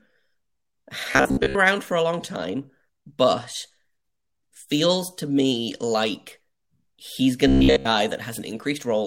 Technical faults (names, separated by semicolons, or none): robotic sound from repeated short buffers